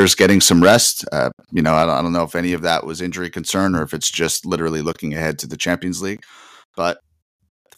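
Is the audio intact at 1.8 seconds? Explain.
No. Microphone overload runs from 1.68 to 1.83 s: the loudest peaks, about 3 dB past full scale, have their tops flattened. That is likely from the input gain being set too high for the converter, and it gives those syllables a harsh, crackling edge.

Right after it, at 1.83 s, the microphone volume is stepped down. The voice and the background together fall by about 4 dB in one abrupt step. This is likely the call software reacting to the distorted peak by lowering the device's input level at once.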